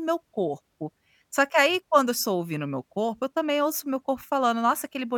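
Listening to the speech recording, nothing stood out as a technical fault at any point.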